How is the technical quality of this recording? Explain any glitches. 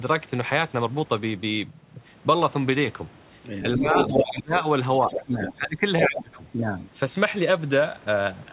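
The recording has narrowband call-path quality, with nothing above 4 kHz, which fits a G.711 mu-law link at 64 kbps. In its middle stretch the voice ducks and a second voice bleeds in.

Speech suppressed in double talk, from 3.77 to 4.58 s, 4.99 to 6.36 s and 6.55 to 6.76 s: the voice sinks by roughly 15 dB in the first two stretches and about 10 dB in the last, dipping and breaking up in pieces. The likely cause is an echo canceller that, with both parties talking at once, could not separate the near talker from the loudspeaker echo and turned everything down.

Other side's voice leaking through, at 3.97 to 4.33 s, 5.07 to 5.52 s and 6.01 to 6.22 s: a second voice comes through in short scraps. In the first and third scraps it is about as loud as the main voice, and in the second it is a little quieter. This is likely residual echo: the far end played over a loudspeaker was picked up by the microphone, and the canceller removed only part of it.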